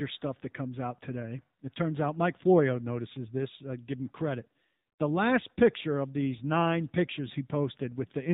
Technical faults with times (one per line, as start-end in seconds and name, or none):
0.00-8.33 AMR narrowband mobile codec